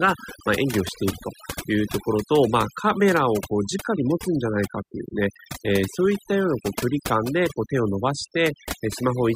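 From start to finish the background sinks to near silence dotted with twinkling specks. That is overdone noise removal: a noise reduction setting too strong cut individual frequency bands whenever they neared its noise estimate, taking quiet speech detail with them.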